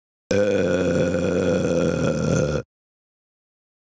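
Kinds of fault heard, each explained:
Gain pumping: the gain is pulled down on each loud sound, swinging about 15 dB, likely from excessive input gain driving a fast limiter.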